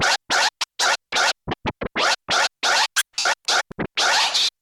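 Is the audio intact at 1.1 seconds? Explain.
No. At about 1.14 s there are lost LE Audio frames: roughly 15 ms of signal went missing, which fits two dropped LC3 frames. The decoder filled the gap by repeating the last spectrum with randomised signs, so the sound briefly turns into a short noisy smear.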